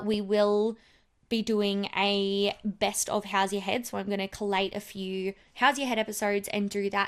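MP2 compression damage runs through the whole of this speech clip. The sound is dull and carries a gurgling, granular grain, likely from MPEG Layer II coding at a low bitrate around 80 kbps. That budget starves the upper sub-bands so they drop out and flicker, while the remaining bands are coarsely quantised.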